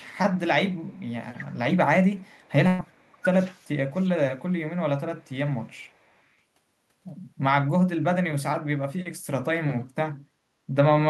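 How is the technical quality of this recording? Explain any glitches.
The recording has three kinds of call-path glitches, all within the first six and a half seconds: echo leaking back, the talker being turned down during overlapping speech, and one short dropout bridged by concealment.

Echo leak shows up at 0.75 to 1.02 s, 2.33 to 2.51 s, 5.17 to 5.24 s and 5.75 to 6.23 s as a faint, delayed copy of the speech trailing 405 ms behind, about 40 dB below the main level. The likely cause is a loudspeaker on the far end whose echo canceller missed part of what its microphone caught. On a spectrogram it appears as a weak ghost of earlier harmonic patterns shifted right by 0.4 s. In the waveform it is barely visible.

Speech suppressed in double talk affects 1.17 to 3.26 s, 3.67 to 4.69 s and 5.44 to 5.67 s. The talker's level sags by roughly 15, 20 and 10 dB at the deepest points, for about one and a half seconds, under a second and a fifth of a second of affected time. 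This is likely an echo canceller that could not tell the talker from loudspeaker echo while both sides spoke, so it pulled both down. The waveform envelope dips abruptly, and the spectrogram's upper bands thin out or blank in patches.

A burst of packet loss sits at 2.67 to 2.82 s. About 120 ms of audio never arrived, and the receiver filled 114 ms by stretching the last sound and fading it, so a held buzz or decaying hiss replaces the missing piece before the audio resumes further along. On a spectrogram this is a smeared, frozen stretch tapering off. The waveform shows a repetitive, shrinking stretch with no silence.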